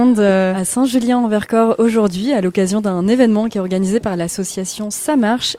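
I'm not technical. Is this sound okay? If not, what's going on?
Yes, this sound is okay; there's nothing going on with it that needs fixing.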